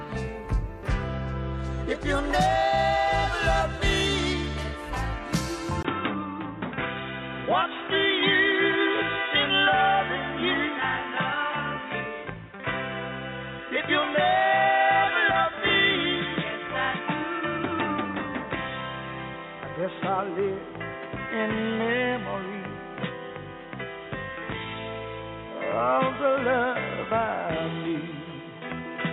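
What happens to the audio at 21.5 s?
At 21.5 s the sound is still band-limited, with nothing above 3.8 kHz and a new noise floor about 30 dB down, with no level change. This has held since a 20 ms gap at 5.83 s. The likely cause is the input switched to a poorer device that passes a narrower band.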